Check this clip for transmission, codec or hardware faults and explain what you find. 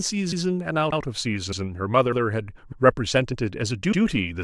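The clip has one fault, overlapping chunks, repeating through the speech at 0.32, 0.92, 1.52, 2.12, 2.72, 3.32 and 3.92 s, each lasting about 0.1 s. The audio was handled in 0.5 s blocks, with each new block starting 100 ms before the previous one finished, so that 100 ms slice plays twice at every join. The result is a short stutter or click at the seam, recurring every 0.6 s.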